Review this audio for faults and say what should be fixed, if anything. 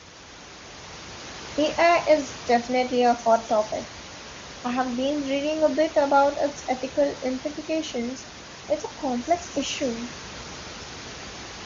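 No faults turn up in the audio, so nothing needs to be fixed.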